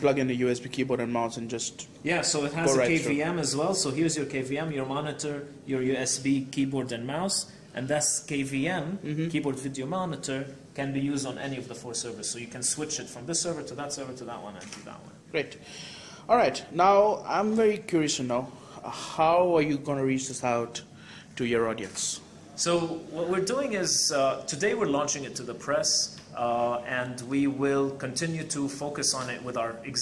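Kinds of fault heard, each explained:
No faults can be heard.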